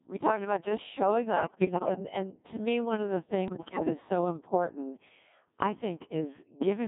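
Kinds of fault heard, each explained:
Codec 2 vocoder: throughout, speech rebuilt from pitch, voicing and spectral envelope at about 1.6 kbit/s, in a 150 Hz to 3.6 kHz band, sounding robotic and buzzy.
Bit errors on digital voice radio: at 1.36 to 1.99 s and 3.48 to 3.91 s, corrupted vocoder frames at roughly 7 and 10 percent errors make the voice jump in pitch, level and tone, warbling into gibberish.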